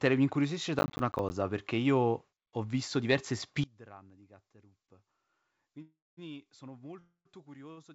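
From 0.79 to 1.31 s there is processor overload crackle. About twenty buffers of roughly 10 ms each miss their deadline and drop to silence, giving gritty tearing.

From 3.64 s to the end, the sound falls about 22 dB. Likely one channel inverted, cancelling the shared centre in mono.

From 5.82 to 6.19 s the sound stretches into a fading buzz, then 210 ms of silence. Packets were likely held up, causing a call audio freeze of 352 ms. The audio then resumes with nothing lost. A second freeze runs from 6.99 to 7.27 s: 261 ms, including 80 ms of silence.

At 7.71 s a short stall from a late packet holds one sound 56 ms too long, with a slight buzz. The G.722 call path above it caps everything at 8 kHz.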